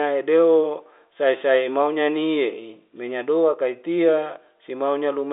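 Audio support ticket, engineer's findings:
No faults found on this line.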